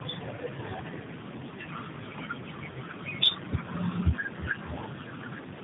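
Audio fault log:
Throughout, tandem speech coding: the speech is rough, muffled and warbly, with nothing above 3.8 kHz. The warble fits two narrowband mobile codec passes, likely AMR-NB, each re-coding the other's damage, which makes it harsher than one low-rate codec alone.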